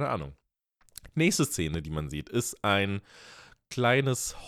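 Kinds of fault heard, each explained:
Loud pop: a sudden voltage pulse, likely from a switch or static, adds two sharp pops about 5 dB over the speech just before "sieht ist ein".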